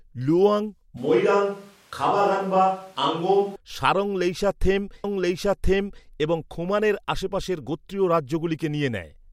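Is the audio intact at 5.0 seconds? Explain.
No. At 5.04 s the playback jumps back and about 1.02 s of the speech plays a second time, running until 6.06 s: a stream segment repeated. The player fetched or queued the same chunk of the stream twice, so a full second of programme recurs, with a small blip at the jump. Unlike a buffer stutter, which loops a few milliseconds rapidly, this replays a long, intelligible stretch once and then carries on, making the clip about a second longer.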